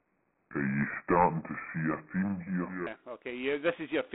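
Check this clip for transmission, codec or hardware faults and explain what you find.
Two faults are present: telephone-codec coding damage across the whole clip, and an opening stretch played too slowly.

G.726 ADPCM, throughout: each sample is sent as a coarse difference from a running prediction, adding a harsh, rasping hiss that rises and falls with the speech. The band runs from 250 Hz to 3.5 kHz with nothing above 4 kHz, and the damage is plainly audible, which fits 24 kbit/s coding.

Section at the wrong speed, 0.0 to 2.87 s: this stretch plays at 0.676 times its proper speed, so it sounds slow, dragged and about seven semitones low, likely from playback against the wrong clock.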